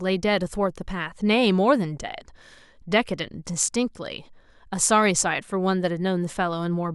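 No technical faults can be heard anywhere in the recording, and the signal stays intact throughout.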